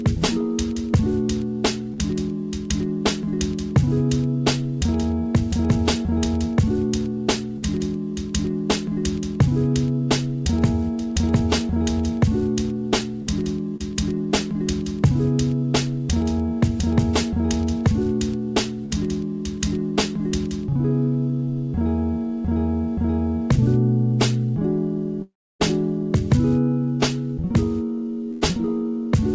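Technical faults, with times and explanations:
1.94 s, 7.58 s, 13.22 s and 13.76 s: short concealed packet loss. About 40 ms never arrived each time. The receiver extended the last sound, leaving a brief smear or wobble.
18.86 s and 28.32 s: burst of packet loss. About 40 ms went missing at 18.86 s, and 100 ms at 28.32 s. The held sound fades, and playback resumes with that stretch gone.
25.22 to 25.62 s: long network dropout. About 380 ms is missing, likely from the network stalling. The last sound stretches briefly, then roughly 290 ms of silence follows before the audio returns further on.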